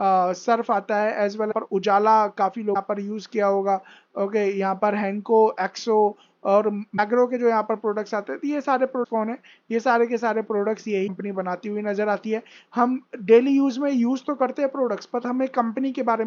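Broken MP3 bit reservoir at 1.50, 2.73, 6.96, 9.03 and 11.06 s: brief 30 ms glitches where the audio jumps ahead, likely from frames missing their borrowed data.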